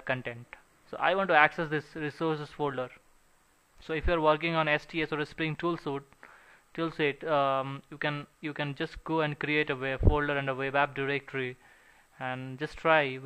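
Nothing stood out as a technical problem on listening.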